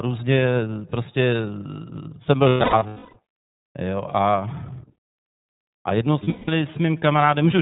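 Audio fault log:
Throughout: iLBC codec. The speech is confined to a narrowband channel with nothing above 4 kHz, and the coding damage is plainly audible as a rough, slightly synthetic edge on the voice. The character fits iLBC's 30 ms frame mode at about 13.33 kbps, where each frame's excitation is coded on its own without reference to the previous one, so detail is traded away for robustness rather than smoothed across frames.
2.49–3.18 s and 6.23–6.49 s: lost iLBC frames. In the first stretch about 510 ms of audio is missing, scattered across 660 ms, with the longest unbroken gap around 300 ms. In the second, about 210 ms is missing across 240 ms, mostly in one run of roughly 200 ms. The decoder fills each gap by repeating the last pitch cycle mixed with noise, heard as a held, buzzy vowel that fades on the longer run. Because frames stand alone, the voice is right again almost immediately after each gap.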